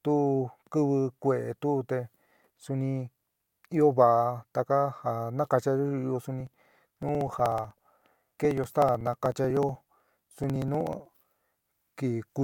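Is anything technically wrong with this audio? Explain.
Yes. From 6.41 to 11.12 s there are periodic USB or driver dropouts. Something stalls the USB bus or audio driver every 0.062 s, and each stall skips roughly 2 ms of speech. The result is around seventy evenly spaced ticks running through that stretch.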